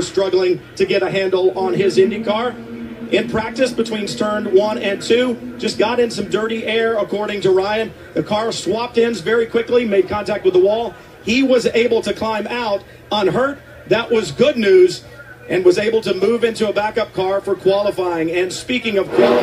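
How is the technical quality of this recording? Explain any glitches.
No glitches turn up anywhere in this recording, so there's nothing here that needs explaining.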